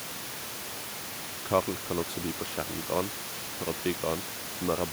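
Nothing goes wrong anywhere in this speech, and the only other thing you'll hear is some background noise from the room itself, sitting about 11 dB below the talking.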